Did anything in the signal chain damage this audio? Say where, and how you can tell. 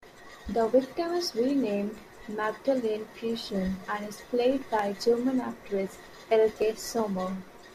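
Yes. The damage sits at the driver or buffer stage. The speech carries clock drift buffer slips: a regular click recurs about every 1.1 s from 0.41 s to 7.0 s, roughly seven in all. On a spectrogram each one shows as a thin vertical broadband line, evenly spaced; on the waveform, as a step where the cycle jumps. Likely cause: two devices on independent clocks, about 150 ppm apart, so the buffer periodically drops or repeats a handful of samples.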